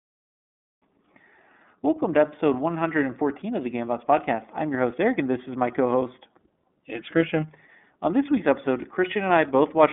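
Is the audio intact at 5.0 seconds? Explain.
No. At 5.0 seconds the speech is still coloured by the iLBC codec, which is present for the whole clip. The line band runs from about 200 Hz to 3.5 kHz, and nothing above 3.7 kHz gets through. The codec codes each 30 ms frame on its own, rebuilding the excitation without help from the frame before. That gives a plainly audible rough, synthetic edge, which fits the 13.33 kbps mode.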